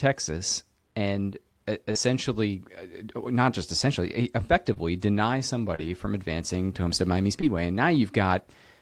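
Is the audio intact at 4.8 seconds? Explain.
No. Short concealed packet loss runs from 4.73 to 4.78 s, with about 20 ms of audio missing. The receiver filled the gap by extending the preceding sound, either from its pitch or as shaped noise, then crossfaded back, leaving a brief smear.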